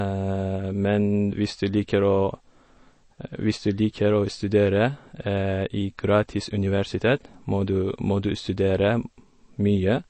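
From start to finish the speech sounds watery and swirly, with metallic chirps on s sounds and nothing above about 8.3 kHz. This is likely MP3 compression starved of bits, which fits a rate near 32 kbps: the encoder cuts the treble and lets weak frequency lines flicker between frames.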